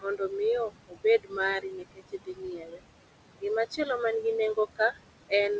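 Noise suppressor artifacts run through the whole clip: the background is pulled down about 20 dB between phrases. The room noise sits only about 11 dB below the speech, so the suppressor has a lot to remove. Speech cut by the noise suppressor occurs at 0.01–0.33 s, 0.69–1.37 s, 1.62–2.8 s and 4.76–4.98 s. Here quiet speech was mistaken for noise and dropped by up to about 22 dB. The affected speech sounds swallowed or faint, for longest across 1.62–2.8 s. The G.722 call path leaves nothing above 8 kHz, which fits a 64 kbps wideband link.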